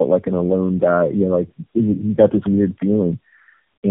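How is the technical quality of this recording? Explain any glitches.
The quality is poor, degraded throughout by tandem speech coding. The speech sounds rough, muffled and warbly, which fits a call that crossed several telephone-grade codecs in a row. Each border decoded and re-encoded the already damaged speech, compounding the artefacts. A spectrogram shows nothing above 3.3 kHz and smeared, blotchy formant bands.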